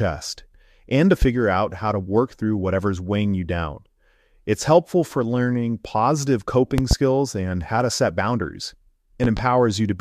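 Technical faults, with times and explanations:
1.22–1.26 s, loud pop: A single sharp pop lands after "and to", about 10 dB above the speech, which carries on underneath. A sudden voltage step, likely from a switch, plug or static, entered the signal and was shaped into a brief pulse.
6.78–6.95 s, loud pop: Two pops in quick succession follow "helpful for learning positive", peaking about 15 dB above the speech. Two closely spaced electrical pulses, likely from a driver glitch, produce this double thump.
9.24–9.41 s, loud pop: After "how to set boundaries", two pops sound close together, about 10 dB above the speech. They are likely another pair of voltage pulses added to the audio path.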